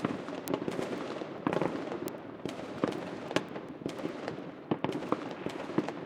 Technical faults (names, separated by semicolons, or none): word clock ticks